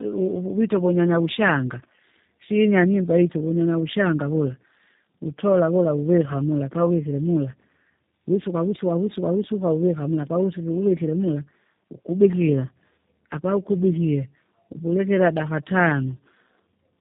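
Speech with tandem speech coding throughout: G.729A coded it twice, re-encoding through G.711 between, leaving it rough and warbly, with the spectrogram empty above 3.8 kHz.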